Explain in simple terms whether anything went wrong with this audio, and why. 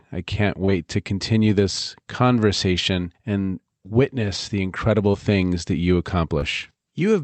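Short concealed packet loss happened three times: tiny pieces of the call, about 20 ms each, arrived too late, so the receiver guessed them by stretching the preceding sound. You hear brief smears at 0.65 s after "I can't", 5.11 s after "and witness the incredible", and 6.39 s after "incredible things that you".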